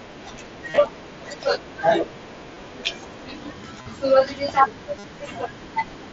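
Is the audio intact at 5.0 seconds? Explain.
No. From 4.98 to 5.04 s, concealed Bluetooth headset packet loss fills about 52 ms, consistent with several consecutive lost packets, by repeating a recent waveform stretch. It sounds like a steady buzzy tone with a warble where real audio resumes, and shows as a periodic repeating waveform with flat harmonic stripes on a spectrogram.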